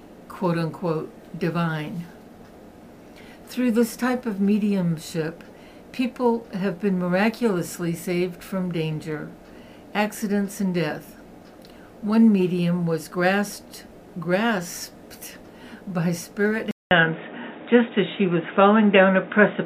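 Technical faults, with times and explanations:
16.71–19.65 s, input switched to a poorer device: after a 200 ms silence the sound turns dull and boxy, with nothing above 3.8 kHz, a level shift of roughly 5 dB and fresh background noise around 40 dB down, likely from capture moving to a narrower-band microphone or headset.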